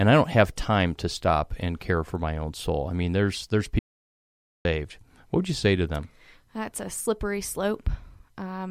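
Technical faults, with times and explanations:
3.79 to 4.65 s, audio dropout to silence: the speech just cuts out mid-flow and snaps back about 0.86 s later, and the gap in between is dead silent, with no room tone or hiss at all. That total blackness is the giveaway. The recorder kept writing while its input vanished, most likely from a device or link dropping briefly or a momentary mute, so whatever was said in that stretch simply isn't there.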